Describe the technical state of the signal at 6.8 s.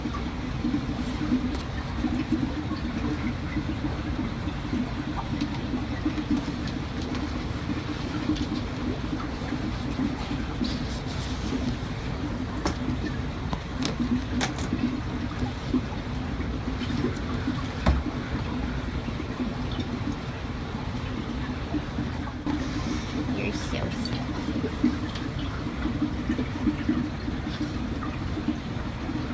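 Nothing at 6.8 s points to a technical fault; the signal is intact at that moment.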